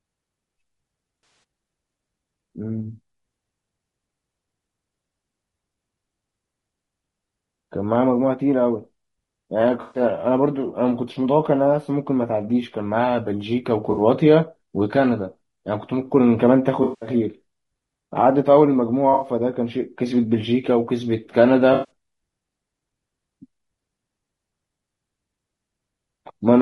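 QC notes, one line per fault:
throughout: low-delay AAC compression. Rough, grainy speech with noise between harmonics and a synthetic top band, likely from short-frame AAC-ELD at a low rate, around 32 kbps.
1.23–1.43, 9.81–10.01, 13.91–14.01, 16.83–17.09, 19.13–19.27, 21.73–21.90 s: AAC frame loss with concealment. Smeared, noisy, phasey patches of 60 to 200 ms where the decoder rebuilt missing frames from the last good spectrum.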